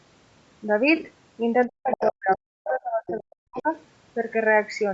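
Throughout the speech, the audio was likely coded with Bluetooth LC3 compression. The upper spectrum was partly zeroed and refilled with noise, giving the voice a plainly grainy, breathy edge. The damage fits a 48 kbps stream in 7.5 ms frames, and the band stops at 8 kHz from the call microphone processing.

From 0.96 to 1.08 s, lost LE Audio frames totalling about 75 ms were scattered across 120 ms, in runs of around 20 ms at most. The decoder repeated the previous spectrum with scrambled signs, so the speech briefly turns into a noisy, smeared texture.

Between 1.67 and 3.68 s, the speech was suppressed in double talk. The echo canceller likely could not tell the talker from the loudspeaker echo and turned everything down, by as much as about 40 dB. Roughly a second and a half of speech dips or drops out in pieces.

Within that stretch, the other side's voice leaks through, likely because echo cancellation left residue in the microphone signal. 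The leaks fall at 1.91–2.11, 2.31–2.36, 2.67–2.71, 3.07–3.19 and 3.56–3.62 s. The first is nearly as loud as the speech, the middle ones are clearly quieter, and the last is barely audible. Each is a brief scrap of a second voice.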